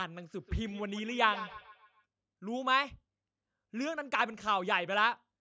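From 0.37 to 2.06 s the speech carries a feedback echo between two devices: a second device replays it into the microphone, so each sound returns roughly every 150 ms, thin and ringing, at most about 14 dB below the speech. A spectrogram shows evenly spaced ghost copies trailing each syllable.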